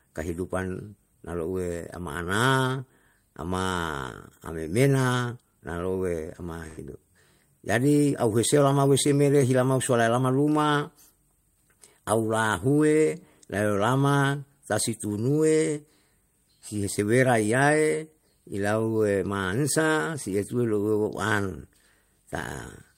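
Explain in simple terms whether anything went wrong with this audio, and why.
Something went wrong at about 6.67 s: a burst of packet loss. A small run of the chunks carrying this speech across the network never arrived in time to be played. To cover the hole, the receiver stretched out the last bit of sound it had and let it fade, so for about a tenth of a second you hear a smeared buzz or hiss. The speech picks up again at 6.79 s, with roughly 100 ms of it gone for good.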